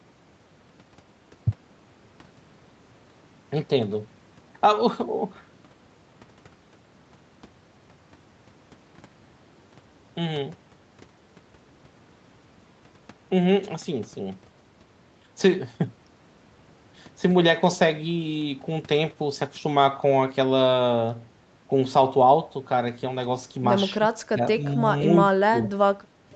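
Speech suppressed in double talk, likely, hits this speech clip near the end, at 24.28 to 24.42 s, 25.09 to 25.16 s and 25.5 to 25.64 s. The talker's level ducks briefly, by around 15 dB in the first and last dips and only a few decibels in the middle one, lasting about 0.1, 0.07 and 0.15 s. The echo canceller treated overlapping talk as loudspeaker echo and pulled the near speaker down with it, over audio already limited to 8 kHz by the call codec.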